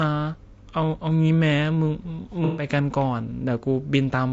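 Throughout, the speech sounds rough and grainy, with noise between harmonics and a synthetic top band, likely from low-delay AAC compression at a rate that fits about 32 kbps. From 2.45 to 2.66 s, a smeared, noisy patch marks AAC frame loss with concealment, where the decoder filled roughly 120 ms of missing audio from earlier spectrum.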